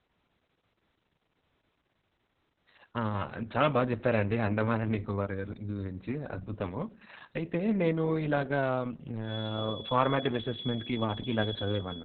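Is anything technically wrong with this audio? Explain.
Yes, the speech has two faults.

Throughout the clip, Opus voice compression is audible. The band is cut to about 4 kHz, and the excitation is coded very coarsely, which fits a very low bitrate around 6 kbps in SILK mode. The speech sounds heavily muffled, hoarse and somewhat robotic.

From 9.19 s to the end of the clip, a steady 3.4 kHz tone sits behind the speech, well below its level and slowly swelling and fading. It is likely a feedback whistle, with the loudspeaker-to-microphone loop holding at the edge of instability, so the whistle persists without growing.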